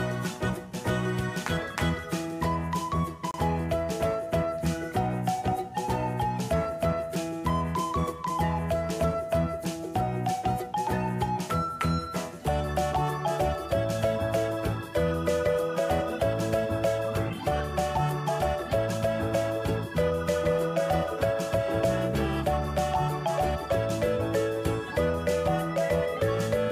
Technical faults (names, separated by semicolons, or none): block of digital silence